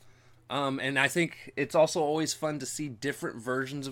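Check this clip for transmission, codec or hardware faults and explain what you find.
Checking the clip turns up no faults to explain.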